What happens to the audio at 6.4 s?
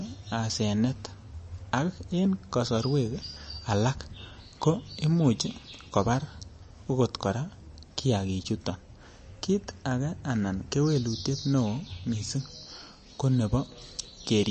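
At 6.4 s you're hearing the same MP3 compression damage that runs through the whole clip: the speech is cut off above about 8.3 kHz and sounds watery and swirly. That's likely a low-bitrate encode around 35 kbps starving the weaker frequency lines.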